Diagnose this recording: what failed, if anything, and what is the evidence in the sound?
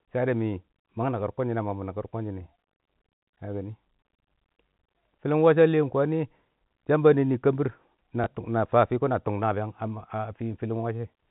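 Network stage: packet loss with last packet repeated. At 8.24 to 8.26 s, one 20 ms packet is lost. The previous packet replays in its place, heard as a small blip.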